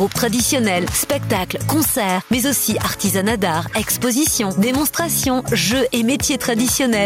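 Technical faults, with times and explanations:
Throughout, gain pumping. The swing is roughly 5 dB. Loud and soft parts sit close in level, so the sound is squashed. Likely cause: gain set far too high, with a fast limiter clamping peaks.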